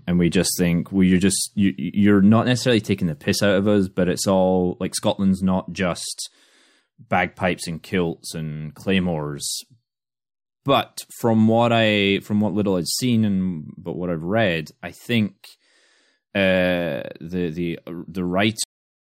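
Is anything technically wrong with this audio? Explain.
Yes, the speech has a cut-off end at 18.64 s: the final buffers were never written, so sound stops mid-syllable into digital silence, showing as an abrupt vertical edge with no decay tail.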